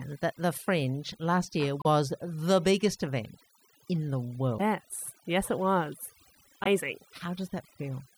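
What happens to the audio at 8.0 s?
At 8.0 s the speech is still affected by the overdone noise removal that runs through the whole clip. The noise reduction was set far too aggressively: every frequency band that sits close to its noise estimate is pulled down hard or shut off entirely, and the softer parts of the voice are taken out along with the noise. What remains is a lowered background broken up into twinkling, glassy specks.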